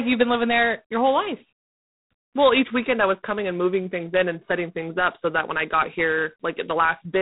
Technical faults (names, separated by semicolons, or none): G.726 ADPCM